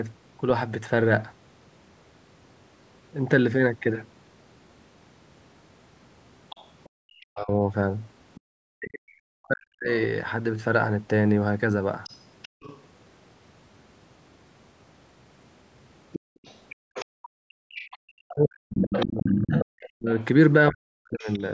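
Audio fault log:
6.5–12.81 s, other side's voice leaking through: the echo canceller likely left residual loudspeaker signal in the microphone path, so a faint second voice sits about 25 dB below the talker.
6.89–7.0 s, background gated by the echo canceller: the canceller clamped the microphone while the loudspeaker played, so room sound drops by about 40 dB, then returns.
7.28–9.89 s, speech suppressed in double talk: with both sides talking, the canceller likely mistook the talker for echo, so the voice dips by up to about 40 dB for roughly 1.5 s in pieces.
12.48–12.61 s, background gated by the echo canceller: the canceller briefly shut the microphone during loudspeaker output, so the background falls away by about 39 dB for a moment.
16.12–21.44 s, other side's voice leaking through: echo cancellation likely failed badly here, letting the far-end voice through only about 5 dB below the talker, nearly as loud.
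16.2–16.76 s, background gated by the echo canceller: the canceller pulled the microphone down hard as playback began, so room sound drops by about 38 dB over roughly 0.3 s.
17.04–21.4 s, speech suppressed in double talk: overlapping talk likely confused the canceller, which attenuated the talker too, chopping the voice with drops up to about 40 dB, roughly 3 s in total.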